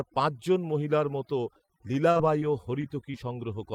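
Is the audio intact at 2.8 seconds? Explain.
No. A short concealed packet loss falls between 2.81 and 2.85 s. About 20 ms of audio never arrived in time. The receiver filled it by extending the preceding sound, then blended back into the real signal. It is heard as a brief smear or wobble.

The overdone noise removal that runs through the whole clip also affects this moment. The filter pushes frequency bands near its noise estimate far down, taking quiet parts of the speech with them. The background drops and breaks up into twinkling specks.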